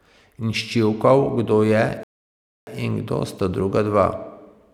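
At 2.03 s the player runs out of downloaded audio, a rebuffering stall, and waits for more data. The speech cuts to silence for about 0.64 s, then picks up exactly where it stopped, at "in kdo sta", with nothing missing, only time added.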